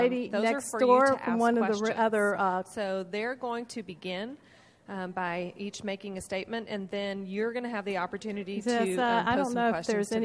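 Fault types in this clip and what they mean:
No technical faults can be heard anywhere in the clip; the signal stays continuous and steady, with nothing in it pointing to a problem in capture, processing or playback.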